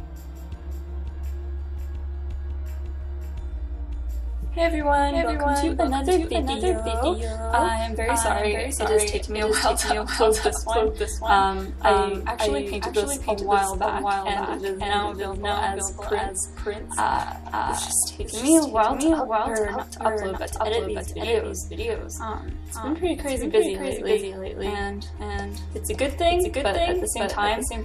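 A second, slower capture path or an out-of-step edit has likely mixed the audio in twice, producing a doubled audio track throughout. A full-band copy trails about half a second behind, roughly 5 dB quieter, with no decay or room colour, so every sound repeats as a flat, distinct echo.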